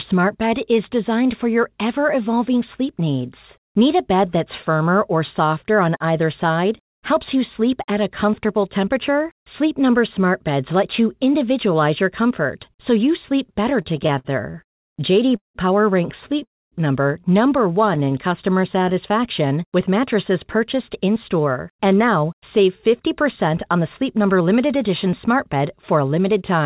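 Speech heard over a call path, band-limited with nothing above 4 kHz, as fits G.711 narrowband. From 13.82 to 16.44 s there are repeated stalls (stutter). Twelve gaps are filled with continued sound, 485 ms in all, the longest 179 ms. Packets arrived late, so the jitter buffer kept running dry. At 16.44 to 16.75 s the audio freezes for 278 ms, mostly silent for 240 ms. This call audio freeze is likely caused by held-up packets draining the buffer before playback resumes. A second, brief stutter follows at 17.95 to 18.14 s, with three short gaps of 15 ms or less. From 18.04 to 19.49 s a jitter buffer slow-down plays the speech at 94% speed. It adds 86 ms by repeating pitch periods to rebuild a reserve, so sounds drag at unchanged pitch. From 21.07 to 26.60 s a jitter buffer speed-up runs at 106%. It trims roughly 0.4 s of pitch periods to cut excess delay, and the speech sounds hurried.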